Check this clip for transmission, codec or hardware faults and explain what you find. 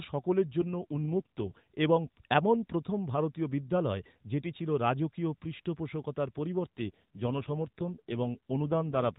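Two AMR rate drops occur in this speech, riding on an AMR narrowband mobile codec path that already cuts everything above 4 kHz. From 0.62 to 1.65 s, and again from 6.62 s to the end at 9.19 s, the link appears to have weakened and the codec switched to a lower mode, with the sound pointing to a fall from about 12.2 to 5.9 kbps as bits went to error protection. With fewer pulses to model each frame, the voice turns rougher and buzzier, more synthetic, with no gap and no change in bandwidth.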